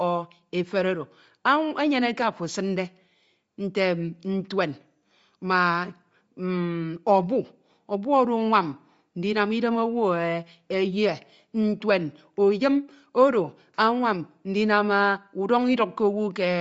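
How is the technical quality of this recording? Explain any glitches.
The recording has clearly audible codec damage from start to finish. The speech has a breathy, grainy edge and nothing above about 7.7 kHz, the likely result of Bluetooth LC3 compression at a low rate. The transform codec discards much of the upper spectrum and fills it with synthetic noise, which fits 10 ms frames at around 32 kbps. That noise-filled hiss sets it apart from a plain low-pass filter, which would simply sound dull.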